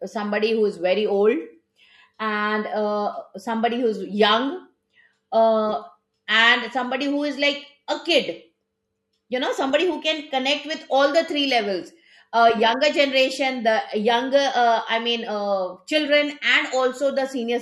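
No technical faults can be heard anywhere in this speech recording. Nothing interrupts or alters the sound at any point.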